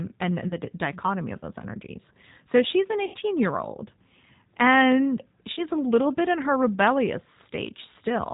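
Speech passed through a G.729 codec, consistent with the 8 kbit/s variant, which rebuilds the voice from a filter, a pitch predictor and a few pulses per frame; the result is band-limited below 4 kHz and plainly rough and synthetic throughout. VoIP packet loss concealed by the speech codec strikes at 0.48–0.56 s, 3.05–3.16 s and 5.54–5.62 s, where about 30 ms, 90 ms and 30 ms of audio went missing. The decoder stretches the last sound into a fading buzzy tone or coloured noise, and the voice stays weak until it rebuilds.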